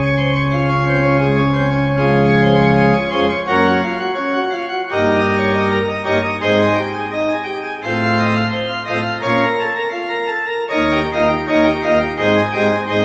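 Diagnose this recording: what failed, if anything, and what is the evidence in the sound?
Nothing stood out on listening; the sound comes across as expected for audio carried over a call path with an Opus codec limiting the top end to about 8 kHz.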